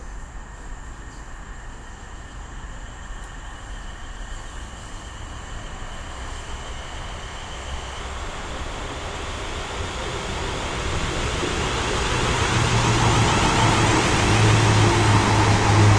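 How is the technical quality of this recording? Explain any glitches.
The technical quality is sound, with the signal staying steady and intact, with no glitches to explain at any point.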